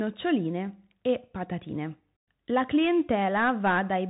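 The clip is speech carried through a Bluetooth CVSD headset codec for its whole length. Nothing above 3.8 kHz survives. The one-bit coding leaves scratchy sibilants and a granular hiss, which fits a 64 kbps stream.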